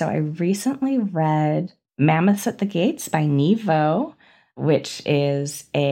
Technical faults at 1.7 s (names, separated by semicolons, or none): none